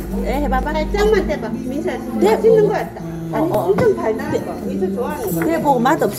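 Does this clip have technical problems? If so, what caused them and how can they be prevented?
Yes. A repeated buffer occurs at 0.63 s and 3.54 s: new audio arrived late, so the device replayed its last block, about 2.7 ms long, which fits a 128-sample buffer. Each single repeat is heard as a brief click. A larger buffer or higher-priority audio thread prevents it.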